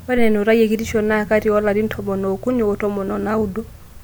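No technical faults can be heard anywhere in the speech recording; the signal stays continuous and stable throughout.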